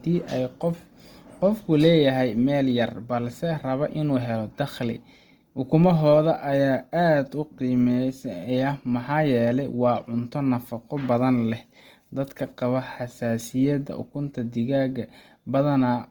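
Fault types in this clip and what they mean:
Opus compression: throughout, the speech sounds rough, grainy and noise-filled rather than swirly like MP3, because sparse bands are filled in instead of left empty. Bandwidth stays full, up to about 20.1 kHz, which likely fits Opus music mode near 24 kbps.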